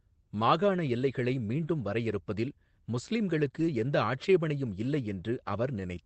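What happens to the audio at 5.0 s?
Nothing goes wrong at 5.0 s: the speech passes through intact there, with only the steady band-limited character of the Opus call path and no dropout, glitch or other fault.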